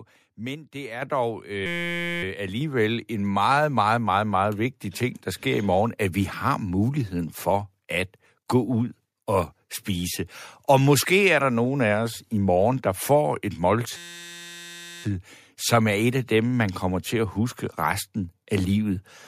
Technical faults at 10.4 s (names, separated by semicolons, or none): none